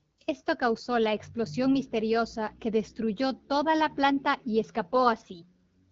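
A speech clip carrying two bursts of AMR bit errors, from 0.75 to 0.84 s and from 4.92 to 5.04 s. In each, flipped bits in the weakly protected parts of the frames misplace the excitation pulses and skew the fine pitch, gain and spectral values, so the speech turns hoarse and gargly while keeping its pitch and loudness. That distinguishes it from lost frames, which would leave gaps or smeared, repeated sound. Around it, the wideband coding sounds clean, which fits 12.65 kbit/s AMR-WB.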